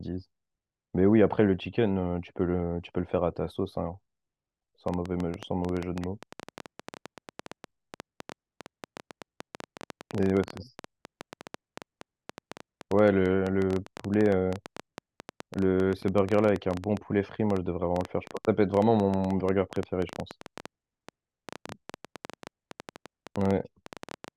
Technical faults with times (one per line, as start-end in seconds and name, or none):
4.88-24.29 train of clicks